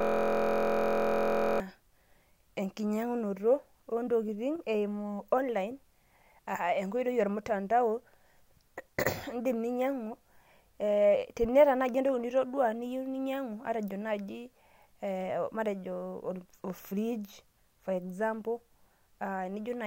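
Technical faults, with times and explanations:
0.00 to 1.60 s: system hang loop. Already under way as the clip opens, one 23.22 ms fragment of speech repeats exactly 68 times, heard as a steady 43.1 Hz buzz. The output kept replaying a frozen ring buffer, consistent with a 1024-sample buffer.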